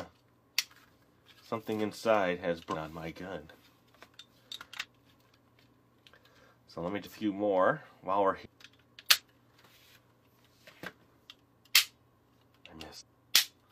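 Compressed frames are skipped at 2.70, 4.79, 5.30, 7.02, 8.41, 9.15, 10.27 and 12.96 s. Each time, whole frames never play, and the sound jumps ahead by roughly a fifth of a second to a full second.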